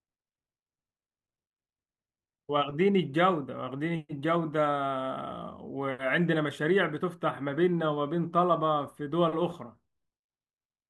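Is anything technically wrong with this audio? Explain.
No, nothing technically wrong stood out on listening to this speech recording.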